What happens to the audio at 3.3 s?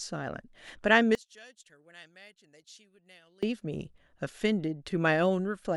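At 3.3 s the speech is still in a deep dropout running from 1.15 to 3.43 s, sitting about 28 dB down as a faint residue. The likely cause is one channel inverted: reversed polarity makes the shared centre content cancel when summed to mono.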